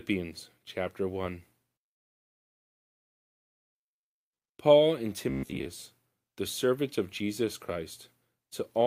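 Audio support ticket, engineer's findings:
Call audio freeze, 1.93–3.77 s. Sound stops into roughly 1.8 s of silence, then resumes exactly where it left off. Nothing lost; everything after runs 1.8 s late. Likely jitter buffer underrun from held-up packets. Unlike a dropout, no audio is missing.

Robotic sound from repeated short buffers, 5.30–5.66 s. Rigid metallic buzz at 66.7 Hz across most of the stretch, fitting a 15 ms block replayed. Likely starved audio feed. Unlike the freeze, real audio is skipped, not delayed.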